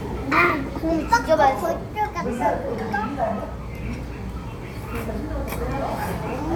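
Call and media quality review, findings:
Nothing stood out on listening; no issue to log for this audio.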